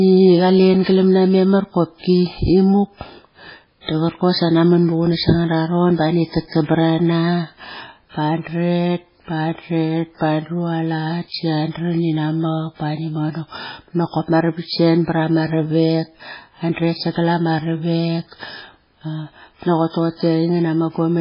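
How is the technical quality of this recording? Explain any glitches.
The technical quality is poor. Heavy MP3 compression runs throughout, likely from a very low bitrate around 16 kbps. Starved of bits, the encoder cuts everything above 5.3 kHz and switches weak frequency lines on and off, leaving the speech dull, watery and swirly.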